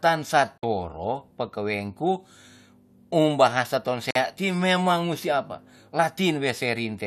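Digital broadcast dropout at 0.58 s and again at 4.11 s: each time the speech is muted for about 50 ms and then returns. The receiver lost frames or rejected them as corrupt, which fits two lost frames per gap. It held silence until valid data resumed, so whatever was sent during each hole is gone.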